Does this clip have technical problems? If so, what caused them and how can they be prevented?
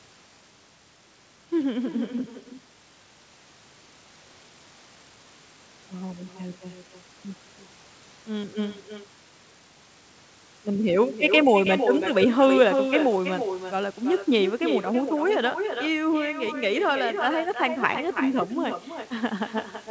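Yes. There's echo with no canceller: the speech returns about 6 dB down, roughly a third of a second later, because the far-end speaker leaks into its microphone. Enabling acoustic echo cancellation or using headphones would prevent it.

At 4.34 s there's a skip ahead. About a second of speech vanishes and the two sides are spliced together with no gap. Keeping the jitter buffer from overflowing would avoid that.

From 6.33 to 7.03 s, a jitter buffer speed-up plays the speech at 110% by trimming pitch periods, cutting around 70 ms. Steadier packet delivery prevents this backlog.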